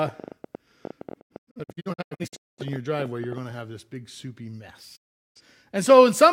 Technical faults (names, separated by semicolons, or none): train of clicks; digital broadcast dropout